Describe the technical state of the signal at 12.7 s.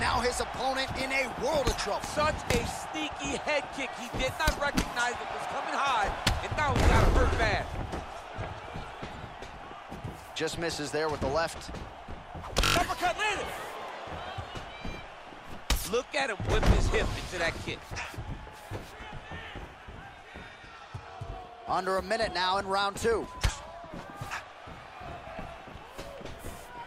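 At 12.7 s the signal is caught in a system hang loop, running from 12.65 to 12.76 s. The system stalled while the playback hardware kept replaying its last buffer, so a 21.33 ms fragment, which fits a 1024-sample buffer, repeats five times and roughly a tenth of a second of audio is lost. It sounds like a brief buzzy stutter near 46.9 Hz. On the waveform it appears as identical repeating blocks, and the spectrogram shows vertical stripes at that rate.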